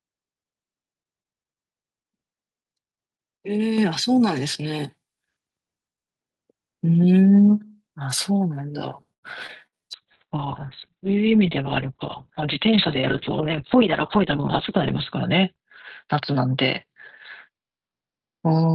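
At 3.78 s the microphone volume stepped up by about 5 dB, and at 4.8 s by a further 2 dB or so. The input gain was raised in discrete steps, so the speech and the room noise behind it jump louder together, abruptly.

From 9.13 to 9.26 s there is a short stall from a late packet. A packet arrived about 93 ms late, and the receiver held the last sound until it came in. Nothing is lost, but that sound hangs on unnaturally before speech resumes where it stopped.

Between 9.47 and 9.52 s comes a short concealed packet loss. Around 60 ms of audio never reached the decoder in time, and the receiver bridged it with a brief synthetic extension of the preceding sound. It is heard as a quick smear, and the receiver also trimmed some of the delay it had just built up.

At 9.67 to 9.75 s there is a burst of packet loss. About 60 ms went missing in a row, and the gap was filled by continuing the last sound while fading it down. 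After that, speech picks up further along, with that stretch absent.

From 9.77 to 10.05 s a jitter buffer slow-down follows. To rebuild its reserve, the receiver repeated individual pitch periods, adding about 43 ms and running the audio at 88% speed. Pitch stays put, but the speech sounds drawn out.

The call bitrate drop begins at 9.98 s and runs to the end. The encoder was pushed down to a very low rate, and the audio bandwidth narrows from full band to about 4 kHz. That points to a drop from around 32 kbps to roughly 6 kbps, held at its lowest for about 5.2 s. The speech turns muffled, rough and watery.

During that degraded stretch, from 13.46 to 14.78 s, there is a jitter buffer speed-up. The receiver cut short pitch-period pieces to shed excess delay, about 50 ms in all, at 103% speed. The speech runs slightly faster at an unchanged pitch.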